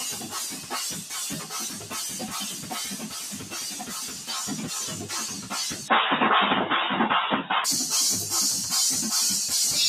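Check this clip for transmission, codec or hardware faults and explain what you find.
A speech-tuned noise suppressor is running on material it was never meant for. Throughout, it treats steady and decaying content as noise and pulls it down, with gain swinging by roughly 10 dB, so sustained parts and tails sink while sharp onsets pass, giving a pumping, fluttering, thinned-out sound.

Twice the noise suppressor cuts the sound harder, from 3.04 to 3.53 s and from 4.08 to 4.29 s. It misjudges the held content as noise and drops it by up to about 6 dB, so level sags audibly and decays end early.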